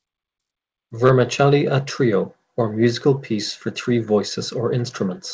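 No technical faults are audible.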